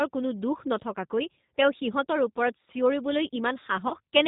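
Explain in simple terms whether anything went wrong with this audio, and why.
The whole recording went through the G.729 codec, a low-bandwidth phone codec that rebuilds the voice from a rough model instead of sending the real sound. That's why it sounds thin, slightly rough and a bit synthetic, with nothing crisp at the top end.

Near the end, from about 3.88 to 3.94 s, there's VoIP packet loss concealed by the speech codec. About 30 ms of the signal never arrived, so the decoder guessed by stretching what it had just heard. You get a short stretched patch, a buzzy tone or a coloured noise, that fades before the voice settles back in.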